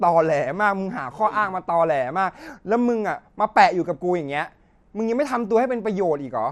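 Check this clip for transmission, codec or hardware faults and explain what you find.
One codec fault runs through the whole recording. The speech sounds dull and carries a gurgling, grainy distortion from start to finish. The likely cause is MP2 compression at a low bitrate, one that fits a setting around 80 kbps. MPEG Layer II splits the signal into 32 equal sub-bands and shares out bits among them. Short of bits, the encoder shuts off upper bands, so treble drops out and flickers. The bands that remain are coarsely quantised, which gives the granular texture.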